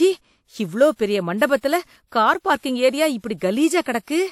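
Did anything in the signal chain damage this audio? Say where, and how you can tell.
Yes, at the codec stage. Pre-echo appears from 3.82 to 3.86 s. A short hiss rises about 38 ms ahead of a sharp speech onset, which sounds smeared. The transform codec spread quantisation noise across its block, filling the quiet moment before the attack.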